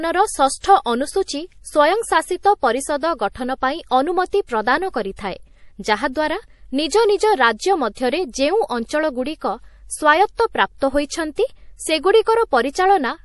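Throughout the speech, the signal was likely squeezed through MP3 compression at a low bitrate, which fits about 48 kbps. The encoder drops everything above 11.5 kHz and leaves plainly audible damage: dull, watery, swirling tone, with chirpy sibilants and softened attacks.

At 0.61 s, the codec spreads its quantisation noise back across the block ahead of a sharp onset, so about 30 ms of hiss precedes it and the attack smears. The same pre-echo returns at 5.16 s, just after "ଗଠନ ପାଇଁ ଅନୁମତି ପ୍ରଦାନ", spanning about 24 ms.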